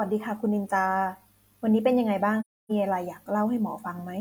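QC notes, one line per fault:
2.40–2.72 s AAC frame loss with muting: speech drops out for about 0.3 s, with a soft fade at each edge, consistent with seven zeroed frames.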